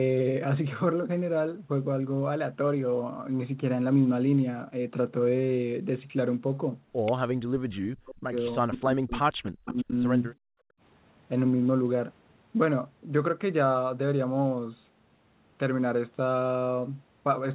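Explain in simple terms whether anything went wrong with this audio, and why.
Two people likely talked at once, and the echo canceller, unable to tell them apart, turned the speech down. From 7.35 to 8.37 s and 8.6 to 9.94 s it sinks almost to silence: speech suppressed in double talk.

The echo canceller on a loudspeaker end likely missed some of the sound, causing an echo leak. From 9.67 to 9.83 s a faint copy repeats about 0.37 s late.

The echo canceller clamped the microphone while the loudspeaker played. This is background gated by the echo canceller: the room sound nearly vanishes from 10.35 to 10.8 s.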